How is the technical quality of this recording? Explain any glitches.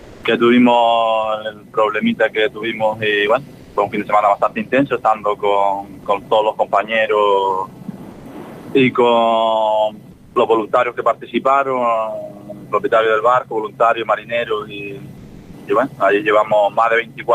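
The recording has one recurring glitch: comfort noise in place of the background, during the quiet gaps at 0 to 0.23 s, 3.59 to 3.75 s, 8.11 to 8.25 s, 10.11 to 10.35 s and 15.17 to 15.53 s. The likely cause is discontinuous transmission of the kind Opus DTX uses. The sender goes silent when nothing is detected, and the receiver invents a smooth, featureless hiss, about 2 to 4 dB quieter than the real background. Unlike a noise gate, which leaves true silence, these patches still hiss but lose the background's texture.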